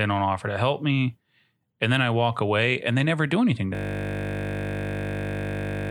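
At 3.75 s, after "never do anything to", a system hang loop begins. The audio freezes into one 20 ms piece repeating at 50 Hz, a steady buzz lasting to the end.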